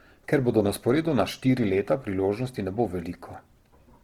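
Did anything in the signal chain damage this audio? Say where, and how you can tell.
Yes, at the codec stage, and it runs through the whole clip. The speech has that rough, grainy texture where tonal parts go noisy instead of hollowing out into the swirly holes you'd get from MP3, and the damage is plainly audible. Bandwidth hasn't collapsed, with content reaching up to about 20.2 kHz, so this is likely Opus compression in its fullband music mode, starved for bits in a way that fits something like 16 kbps.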